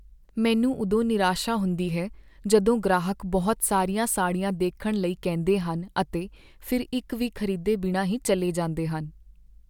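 Speech recording, no technical faults detected.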